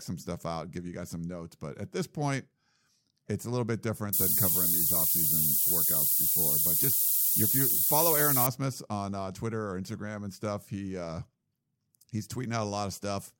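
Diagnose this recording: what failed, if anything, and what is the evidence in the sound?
Low bit depth with noise shaping, 4.13 to 8.47 s: a sample-format conversion to about 3 bits pushes rounding error upward, giving bright hiss close to speech level.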